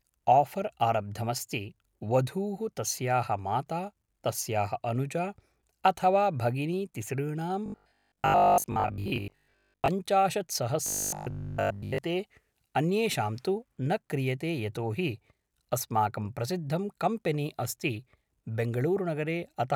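From 7.66 to 9.88 s, right after "अथवा भगिनी तिसॄणां", the speech turns into a rigid metallic buzz fixed at 50 Hz, and it returns from 10.86 to 11.98 s. This is robotic sound from repeated short buffers, likely caused by audio arriving too seldom so that a 20 ms chunk is looped. Most of the first stretch and nearly all of the second is repeated material rather than real speech.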